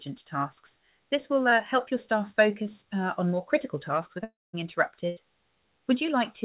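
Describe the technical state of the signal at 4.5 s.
At 4.5 s the signal is inside a likely long network dropout running from about 4.24 to 4.55 s. Roughly 300 ms of audio never arrives, and the receiver stretches the last sound into a fading buzz, leaving near-silence before playback resumes over the band-limited G.711 line.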